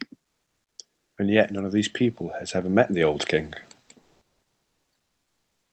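From 0.94 to 1.17 s, and again from 4.01 to 4.92 s, the pauses carry comfort noise in place of the background. The real room sound, already about 55 dB below the loudest speech, gives way to a steady, featureless hiss. The likely cause is discontinuous transmission in the Opus codec, with the receiver synthesising filler while the sender is silent. The first patch sits about 3 dB below the surrounding background and the second about 2 dB above it, so each pause steps in level. The call codec band-limits the audio at 8 kHz.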